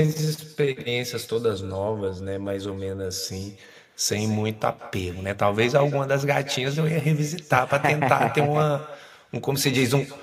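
Speech with an echo with no canceller running through the whole clip: every syllable returns roughly 150 ms later, about 18 dB quieter and thinner, as the far end's loudspeaker feeds its microphone. A spectrogram shows faint, time-shifted copies trailing each burst of energy.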